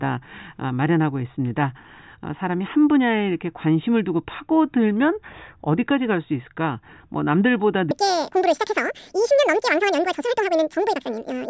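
Speech that, from 7.91 s to the end, plays at a wrong sample rate: twice as fast and a full octave higher together, which fits 8 kHz audio played at 16 kHz, unlike a pitch shift that keeps the pace.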